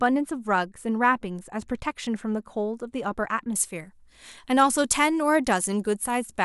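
From 3.56 s to the end, the speech has pre-emphasis left on. The treble was lifted before recording or transmission, and the matching de-emphasis was never applied. The tilt fits a 75 µs FM curve. At 10 kHz the boost is about 14 dB relative to 1 kHz. The voice turns thin and bright. Sibilants hiss sharply.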